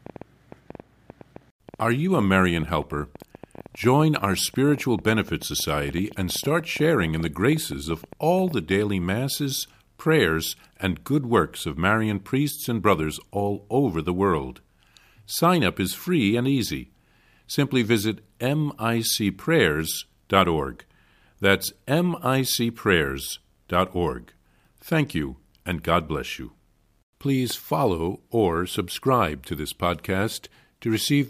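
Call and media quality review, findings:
Train of clicks, 0.1 to 8.7 s, ending just before "masses prayers and good": irregular ticking at about 9 per second, around seventy similar pops, peaks roughly level with the speech and audible in pauses. Likely interference or a faulty connection or power supply.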